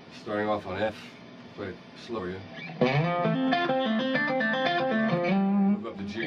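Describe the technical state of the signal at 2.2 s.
Compressed frames skipped at 2.14–2.19 s: about five 46.4 ms frames vanish, so the audio jumps ahead by about 200 ms.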